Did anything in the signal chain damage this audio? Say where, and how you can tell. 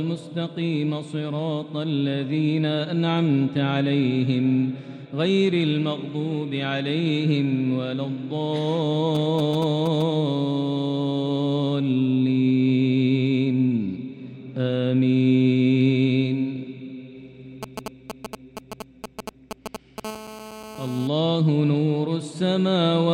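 Yes. The analogue wiring picked up GSM signalling bursts from a nearby 2G phone; its circuitry rectified the radio pulses. From 9.15 to 10.02 s and 17.63 to 20.00 s, a galloping dit-dit-dit of short 217 Hz buzzes appears, roughly 10 dB and then 5 dB below the sound.

GSM phone buzz follows from 20.05 to 21.08 s, once the phone is in a call and transmitting 217 bursts a second continuously. Rectified in the same analogue stage, it becomes a steady, hard, raspy 217 Hz buzz rich in harmonics, about 14 dB below the sound and unrelated to it.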